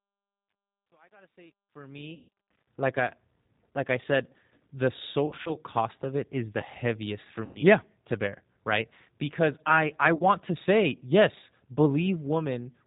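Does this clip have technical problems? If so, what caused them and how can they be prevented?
Yes. The whole clip is speech through the G.729 codec at 8 kbit/s, and the damage is plainly audible. Nothing above 4 kHz survives, and the voice sounds rough and synthetic because it's rebuilt from a vocal tract filter and pitch model. Prevent it by using a wideband codec such as Opus or G.722 where the link allows.

The opening fade-in, from 0 to 2.67 s, has truncation distortion on a fade. It's grittiest up to about 2.1 s, where the quiet signal breaks into square steps. That fits a gain stage keeping only about 10 bits with no dither. Prevent it by processing fades at high resolution and dithering on the final reduction.

There's also VoIP packet loss concealed by the speech codec at four points. The first runs from 2.15 to 2.28 s, just before "like I". The second spreads across 5.26 to 5.57 s, between "like I said the" and "cost of it is", as short scattered gaps of up to 40 ms each. 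The third is at 7.45 to 7.61 s, and the fourth is at 10.15 to 10.23 s, between "I I" and "to say yes". At each one the decoder stretches its last pitch and filter into a fading buzz or coloured noise, and the voice stays weak briefly afterward. Prevent it with a better network path, jitter buffering or forward error correction.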